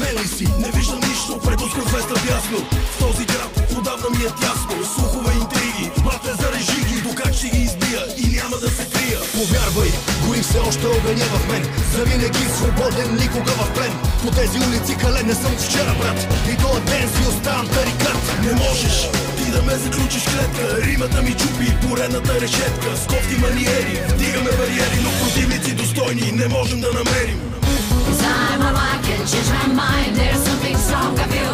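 No technical faults can be heard at any point; the signal holds steady, with nothing interrupting or disturbing it.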